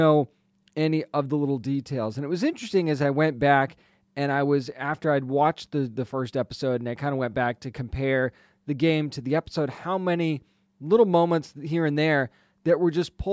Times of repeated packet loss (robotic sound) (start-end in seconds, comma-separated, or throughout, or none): none